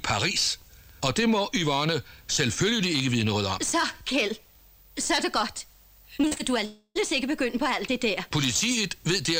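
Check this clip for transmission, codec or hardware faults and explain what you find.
Two transmission faults sit close together late in the clip, both tied to lost audio data rather than to the codec or the hardware.

From 6.21 to 6.41 s there is repeated packet loss, giving a robotic sound. Four short holes, the longest about 39 ms, fall inside this 0.2 s stretch, and each is patched by stretching out the sound just before it. Half of the span is therefore synthetic fill, which makes it choppy. On a spectrogram this appears as a run of smeared, flattened blocks where harmonics freeze briefly. The waveform shows repetitive, oddly regular chunks.

From 6.65 to 6.97 s there is a long network dropout, likely a stretch where no audio arrived at all. Roughly 0.3 s of the original is gone. The receiver fills the gap by carrying the last sound forward as a decaying buzz or hiss, which then gives way to about 30 ms of silence before the audio resumes further on. 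A spectrogram shows a blurred, fading tail followed by a brief blank band. In the waveform the envelope shrinks to a flat line.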